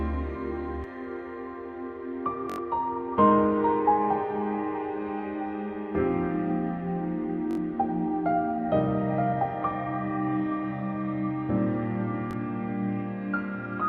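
Repeated buffer at 2.50–2.58 s, 7.51–7.57 s and 12.31–12.33 s. New audio arrived late, so the same 21 ms piece, which fits a 1024-sample buffer, replayed four, three, then one extra time. Each repeat joins hard, giving a brief stuttering buzz, and about a tenth of a second of sound is lost at the first.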